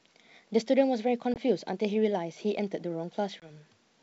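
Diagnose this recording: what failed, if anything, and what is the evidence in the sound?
Network stage: packet loss on an ADPCM call, at 1.34–1.39 s and 3.40–3.53 s. Each opens with a hard 20 ms silence, about one packet, then returns slightly distorted while the G.722 decoder's predictor and step size resync. That recovery distinguishes it from a plain dropout.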